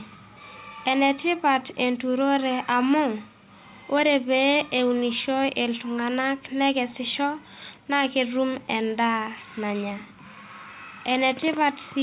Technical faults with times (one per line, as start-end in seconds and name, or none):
3.67-3.90 echo leak
7.75-7.79 echo leak
7.81-7.93 background gated by the echo canceller
10.06-10.18 background gated by the echo canceller
10.47-11.06 echo leak